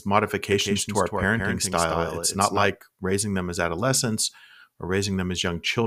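From 0.52 s to 2.70 s, the speech repeats itself about 150 ms late and somewhat quieter, then stops abruptly before "raising them as adolescents": a doubled audio track, likely from a second, slower capture path.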